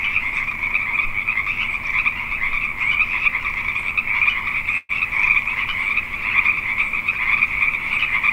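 A clip of sounds with a call audio freeze from 4.77 to 4.91 s. The last sound is stretched into a fading buzz or hiss for about 117 ms. Nothing is lost. The sound then resumes where it stopped, 117 ms late. Delayed packets likely drained the jitter buffer.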